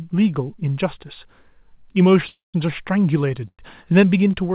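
Speech, carried over a call link with nothing above 4 kHz, which fits G.711 mu-law coding. It has two call audio freezes. The first runs from 2.28 to 2.56 s. The second runs from 3.48 to 3.61 s. In each, the last sound lingers and fades, and then drops to silence. The silence lasts 170 ms in the first and 60 ms in the second. The likely cause is delayed packets draining the jitter buffer. The speech then resumes where it stopped, with nothing lost. Each pause pushes the audio later, by 256 ms and then 109 ms.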